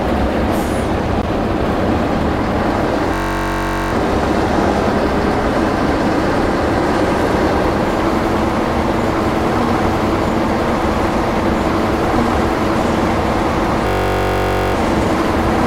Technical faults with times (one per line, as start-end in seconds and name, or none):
3.14-3.93 system hang loop
13.87-14.74 system hang loop